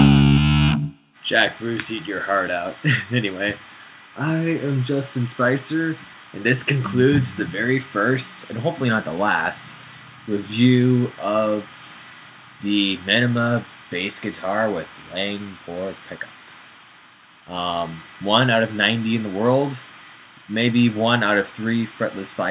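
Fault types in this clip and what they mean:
No faults can be heard anywhere in this clip.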